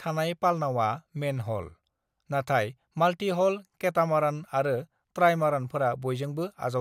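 Nothing in this bit of speech stands out as a technical problem; there's no glitch or dropout anywhere along the way.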